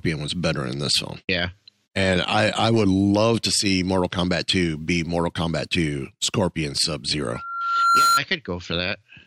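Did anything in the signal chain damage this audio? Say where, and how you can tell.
Yes: a loudspeaker feedback squeal at 7.33 to 8.20 s. A 1.4 kHz tone swells over about 0.7 s to about 5 dB above the speech, as the microphone re-amplifies its own loudspeaker output.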